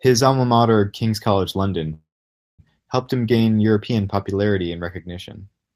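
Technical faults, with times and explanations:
1.93–2.61 s, call audio freeze: the sound stretches into a short fading buzz or hiss, then about 0.54 s of silence, before resuming exactly where it stopped. Nothing is lost, but everything after arrives 0.65 s later, likely from delayed packets emptying the jitter buffer.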